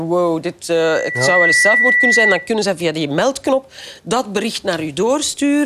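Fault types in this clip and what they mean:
Loudspeaker feedback squeal: A microphone re-amplifies its own loudspeaker, so a 2 kHz tone swells over roughly 0.7 s into a squeal above the sound.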